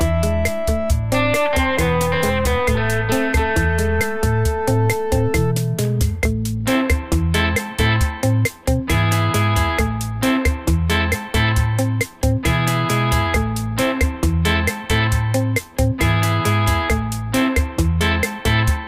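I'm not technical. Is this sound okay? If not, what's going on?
Yes, this one's fine; there's nothing wrong with it that a listener would pick up on.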